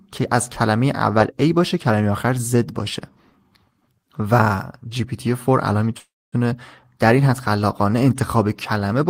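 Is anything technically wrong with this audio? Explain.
Yes. A call audio freeze runs from 5.99 s to 6.44 s. Packets were likely held up in transit, so the jitter buffer ran dry and the receiver stretched the last sound it had into a decaying buzz or hiss before falling to about 250 ms of silence. When delivery resumed, the speech picked up exactly where it had stopped, with nothing lost. The result is an inserted gap that pushes everything after it roughly 330 ms later.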